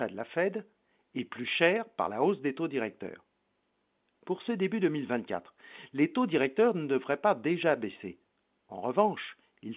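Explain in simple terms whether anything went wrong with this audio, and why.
Nothing went wrong here.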